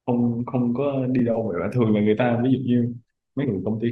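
A short speech clip with two quick blips of damaged data in the compressed stream, at about 1.19 s and 3.43 s. Corrupted bytes there trip up the decoder, which loses frame sync and hunts for the next header, leaving a brief glitch each time.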